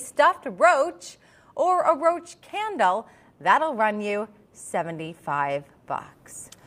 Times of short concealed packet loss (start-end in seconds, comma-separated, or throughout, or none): none